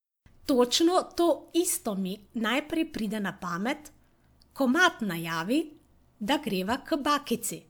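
No technical faults can be heard anywhere in the speech recording. There is nothing to place in time, since no moment stands out as a fault.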